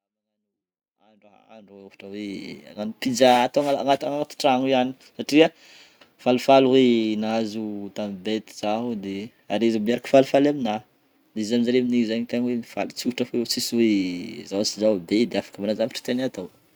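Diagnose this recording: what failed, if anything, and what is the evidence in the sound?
Nothing failed in this speech recording; the only level change is an editor-style smooth fade-in from the top, reaching full level by 2.56 s with no click or hard edge, and no stage in the chain leaves any evidence in the sound.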